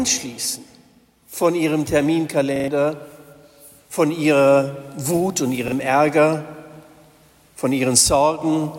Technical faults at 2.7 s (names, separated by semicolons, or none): repeated buffer